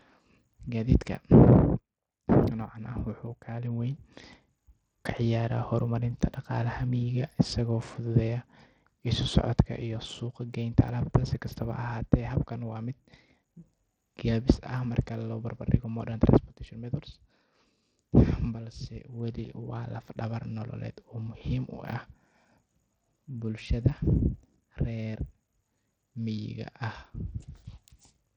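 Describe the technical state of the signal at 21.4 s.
Right around 21.39 to 21.41 s there's a repeated buffer. Fresh audio didn't show up in time, so the device played its last chunk once more, about 23 ms, which fits a 1024-sample buffer. You hear a tiny stutter with a hard join, and roughly 20 ms of the speech goes missing.

Underneath that, the whole passage carries what's likely Bluetooth SBC compression at 80 kbps, and it's plainly audible here. The coarse sub-band quantisation leaves the top end thin and flickery, with a gritty, aliased edge on the speech.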